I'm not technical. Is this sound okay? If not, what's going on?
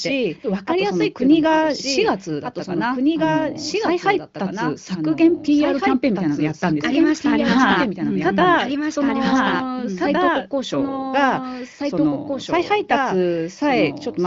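No. A doubled audio track runs throughout: the speech plays twice, with a second, slightly quieter copy trailing about two seconds behind. It's likely captured a second time along a slower route, so everything you hear comes back as a flat, roomless echo.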